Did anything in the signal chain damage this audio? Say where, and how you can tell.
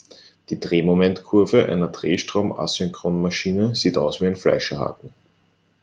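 No, no damage is audible.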